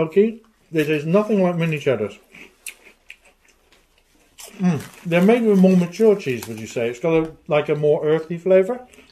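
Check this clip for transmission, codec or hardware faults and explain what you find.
No transmission, codec or hardware faults can be heard anywhere in the audio; the signal stays continuous and intact throughout.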